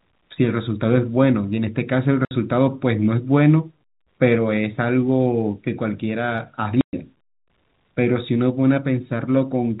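Speech carried over a telephone-band G.711 path, cut twice by packet loss filled with silence: a 60 ms hole from 2.25 to 2.31 s and a 120 ms hole from 6.81 to 6.93 s. Both gaps are whole multiples of 30 ms, which fits lost 30 ms packets replaced by silence. On a waveform each gap is a flat line with abrupt edges. On a spectrogram it is a clean vertical blank.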